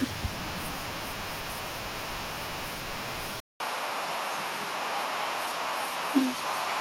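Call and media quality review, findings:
Speech turns duller at 3.40 s through the end, after a 200 ms dropout; nothing above 13 kHz, faint new noise floor, level unchanged. Likely input switched to a poorer device, whose narrower band and own noise replace the original microphone.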